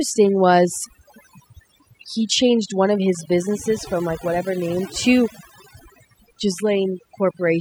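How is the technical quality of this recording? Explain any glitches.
The recording is compromised by overdone noise removal throughout: aggressive spectral gating cuts bands near the noise floor, leaving twinkling near-silent gaps and stripping out quiet parts of the voice.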